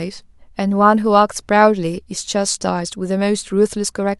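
No technical faults are audible.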